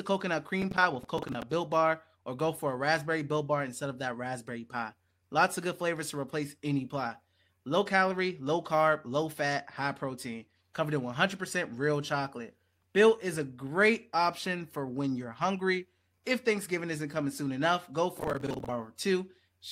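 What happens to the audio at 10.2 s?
Nothing goes wrong at 10.2 s; the speech carries on intact through that moment, with no dropout, click, distortion or other fault.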